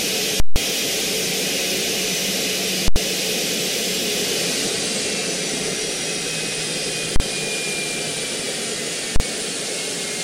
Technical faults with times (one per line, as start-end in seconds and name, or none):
0.40-0.56 invalid numbers at full scale
2.88-2.96 invalid numbers at full scale
7.16-7.20 invalid numbers at full scale
9.16-9.20 invalid numbers at full scale